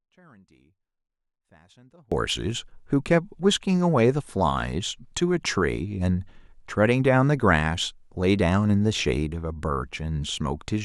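From the start until 2.12 s, an audio dropout to a faint residue leaves only a faint leak of the speech, around 35 dB down, likely because the signal was lost while the path stayed live. The waveform sits flat, then jumps abruptly to full level.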